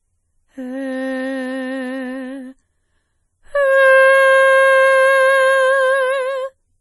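Music with heavy MP3 compression artefacts throughout. Nothing sounds above 11.5 kHz, and the sound is watery. This is likely a low bitrate, around 32 kbps.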